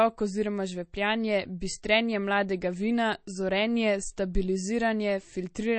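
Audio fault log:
Throughout, MP3 compression: the speech has nothing above 8.4 kHz and plainly audible watery, swirling texture with metallic s sounds, likely from a starved MP3 encode near 32 kbps that cuts treble and lets weak frequency lines flicker between frames.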